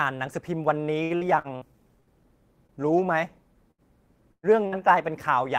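A short speech recording with several network packet-loss faults. From 1.03 to 1.64 s, repeated packet loss (robotic sound) leaves four concealed gaps, the longest 68 ms, giving choppy speech with smeared, repeated harmonic bands on a spectrogram. Bursts of packet loss at 2.00 to 2.10, 3.71 to 3.81, 4.32 to 4.46 and 4.67 to 4.75 s each drop about 60 ms, or 120 ms in the third, which also goes silent for 70 ms. Each shows as a held, fading stretch followed by a jump in the waveform. At 2.67 s a short stall from a late packet holds one sound about 25 ms too long, a brief flat smear on the spectrogram.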